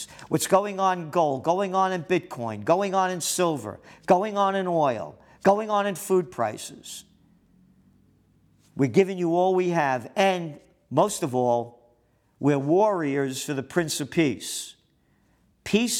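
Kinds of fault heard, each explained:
No faults detected.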